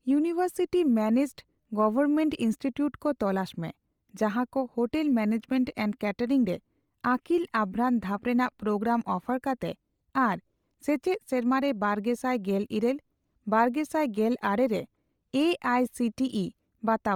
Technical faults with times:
0.00-17.16 Bluetooth LC3 compression

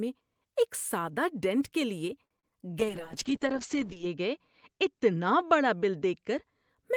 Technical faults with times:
2.25-2.52 repeated packet loss (robotic sound)
2.80-6.75 call bitrate drop

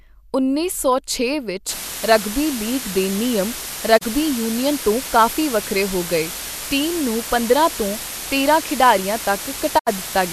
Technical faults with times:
1.69-10.33 low bit depth with dither
3.97-4.03 digital broadcast dropout
9.77-9.89 digital broadcast dropout

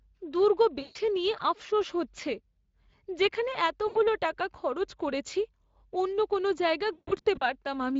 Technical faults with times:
0.00-7.99 Speex codec
0.81-0.97 VoIP packet loss concealed by the speech codec
3.87-3.98 VoIP packet loss concealed by the speech codec
6.93-7.43 VoIP packet loss concealed by the speech codec

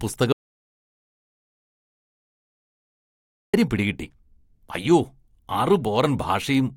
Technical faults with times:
0.32-3.54 audio dropout to silence

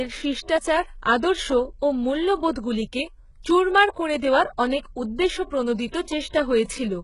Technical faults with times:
0.00-7.04 HE-AAC compression
5.91-6.07 pre-echo
6.64-6.68 pre-echo

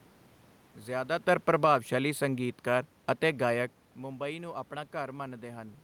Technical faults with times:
1.27-3.76 automatic gain falling

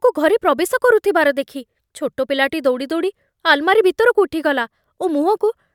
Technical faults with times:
none

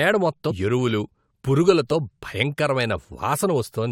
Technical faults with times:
0.50 compressed frames skipped

